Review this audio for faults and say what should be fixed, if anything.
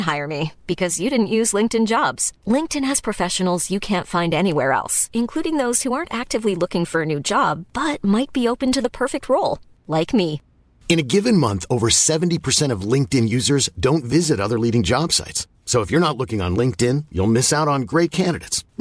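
Nothing stood out on listening to this speech recording, so there is nothing here that needs fixing.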